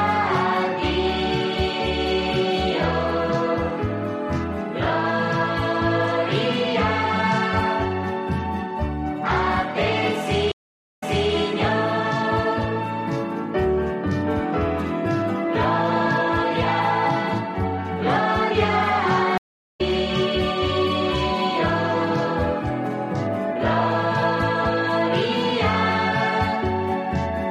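Two stream reconnects: at 10.52 to 11.33 s the audio drops out for 0.48 s, then a fresh decoder picks up 0.34 s earlier, so a bit repeats; at 19.38 to 19.81 s a 0.39 s gap resumes about 0.3 s later, skipping material.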